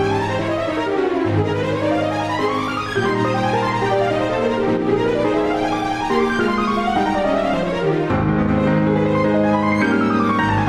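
There are no technical faults to describe at any point in the audio.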